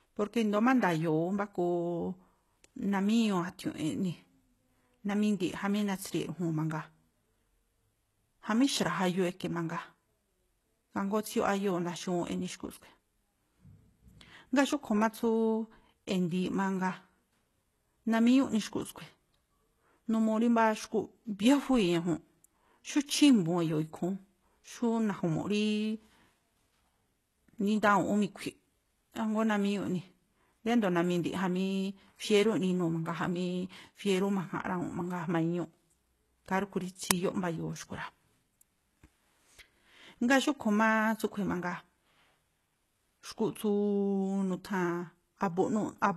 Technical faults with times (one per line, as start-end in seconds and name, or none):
0.00-46.17 HE-AAC compression
37.11 uninitialised buffer